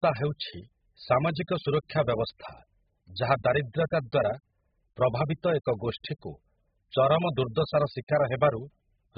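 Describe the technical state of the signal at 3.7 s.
At 3.7 s the speech carries AAC compression damage, as it does throughout the clip. Nothing sounds above 5.1 kHz, so the sound is dull and muffled. Heavy smearing and fizzy sibilants point to very coarse quantisation, likely from a very low bitrate.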